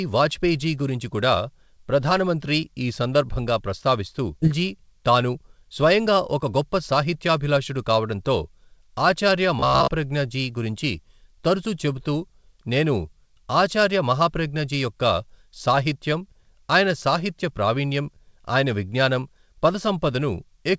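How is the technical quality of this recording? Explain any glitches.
The recording has three audible glitches. The speech lacks content above 8 kHz, which points to a wideband call codec such as G.722.

Skip ahead, 4.42 to 4.50 s: About 0.7 s of speech is missing. The receiver dropped queued audio to cut delay, so the two sides join almost directly.

Jitter buffer speed-up, 5.01 to 5.71 s: Speech runs about 6% fast at unchanged pitch. Short pitch-period pieces, about 50 ms in total, were removed to drain excess buffering.

Robotic sound from repeated short buffers, 9.59 to 9.89 s: A rigid metallic buzz at 66.8 Hz replaces most of the speech. The likely cause is a 15 ms buffer replaying while fresh audio arrived late.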